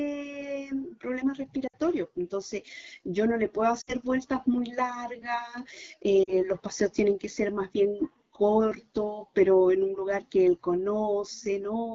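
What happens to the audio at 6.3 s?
Between 6.23 and 6.33 s, lost AMR speech frames occur: about 40 ms of coded speech, which fits two 20 ms frames, failed to arrive intact. The decoder stretched the last good pitch and vocal tract settings at falling gain, so the sound briefly drops to near silence before recovering. Throughout, the AMR wideband (HD Voice) codec runs at 8.85 kbit/s, which leaves the speech around this point plainly rough and raspy.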